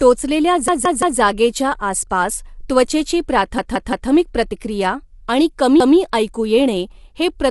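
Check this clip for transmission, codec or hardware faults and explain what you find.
Two faults are present: coding damage throughout the speech and three repeated buffers.

Throughout, the speech is plainly rough and grainy, with nothing above 11.6 kHz. This is likely low-delay AAC compression (AAC-ELD) at around 32 kbps, with too few bits to code each frame cleanly.

Repeated buffer: from 0.68 to 1.20 s and from 3.58 to 4.10 s, just before "प्रतिक्रिया आणि", a 171 ms chunk plays three extra times. At 5.80 to 5.97 s, between "प्रतिक्रिया आणि" and "ऐकू येणे हे", it repeats once. Late audio made the device replay its last buffer, which fits an 8192-sample buffer. Each repeat is heard as a stutter with hard joins.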